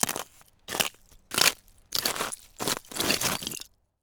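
Everyday sound recording, no audible technical fault anywhere in the clip.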